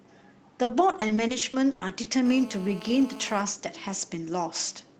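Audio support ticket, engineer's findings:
Repeated packet loss (robotic sound), 0.63 to 2.07 s. Choppy stretch with around a dozen dropouts; longest hole 100 ms; roughly a quarter of the span patched. Probable component: network jitter buffer and concealment. Lost or late packets are filled by extending the last sound, with around 200 ms rebuilt. Spectrogram: smeared, repeated harmonic frames and abrupt vertical cuts. Waveform: periodic-looking copied segments broken by gaps.

GSM phone buzz, 2.26 to 3.42 s. Hard, raspy buzz at 217 Hz, about 18 dB below the signal, steady throughout, consistent with a 2G handset on an active call. Probable component: an unshielded analog input or preamp rectifying the handset's burst transmissions. Spectrogram: horizontal comb of lines at 217 Hz and its multiples, running into the kHz range, independent of the audio. Waveform: fine regular pulse train riding on the signal.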